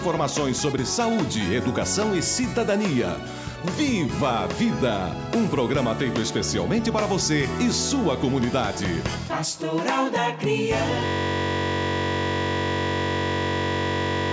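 At 11.06 s a system hang loop starts and lasts to the end. The system froze while the hardware kept replaying one 21.33 ms piece of its ring buffer, which fits a 1024-sample buffer. Repeating at 46.9 Hz, it becomes a steady buzz.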